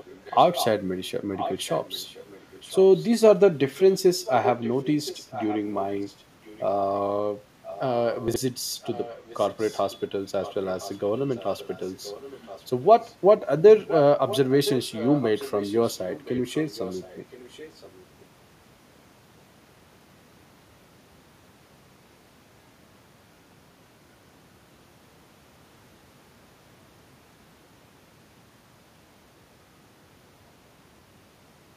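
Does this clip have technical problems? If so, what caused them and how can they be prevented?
Yes. An echo leak runs through 0.0–0.67, 1.35–3.08, 3.74–7.01, 7.64–13.14 and 13.87–18.24 s: a faint copy of the speech trails it by about 1.02 s, somewhere around 10 to 20 dB quieter. On a spectrogram it shows as repeated, fainter harmonic patterns shifted right. It is likely a far-end loudspeaker whose echo canceller let its microphone pickup through; headsets or better-tuned echo cancellation would prevent it.

Chunks out of order appear at 8.28–8.36 s, where a 20 ms chunk plays three chunks late, leaving three hard joins that show as waveform discontinuities and vertical spectrogram streaks. Correct sequencing in the jitter buffer or write path would prevent this.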